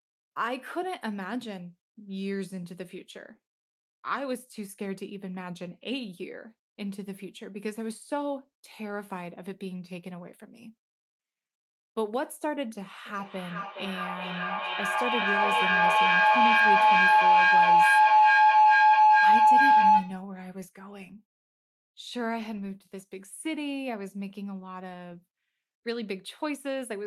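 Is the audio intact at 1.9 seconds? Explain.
Yes, at 1.9 seconds the speech plays through cleanly, with no dropout, click, distortion or other fault to be heard at that moment.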